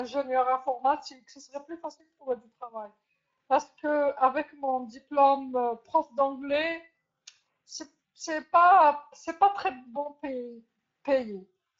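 From start to finish the speech sounds grainy and plainly hoarse, the mark of the Speex codec starving its excitation signal of bits, consistent with a middling rate near 17 kbps.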